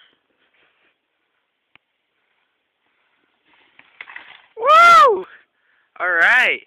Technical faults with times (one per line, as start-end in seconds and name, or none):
4.25 overlap between stream segments
5.24 overlap between stream segments